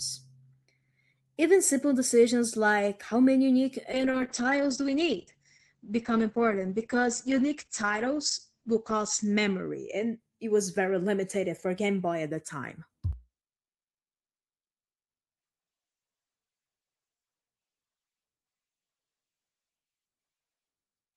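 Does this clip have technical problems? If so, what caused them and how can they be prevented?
Yes. From 3.93 to 10.61 s there is a call bitrate drop: the bandwidth estimate fell and the encoder went from 32 to 9 kbps, staying at its lowest for about 4.9 s. Audio bandwidth narrows from 20 kHz to 8 kHz, so the speech sounds muffled and coarse. Setting a higher minimum bitrate for the encoder and keeping network capacity stable would prevent it.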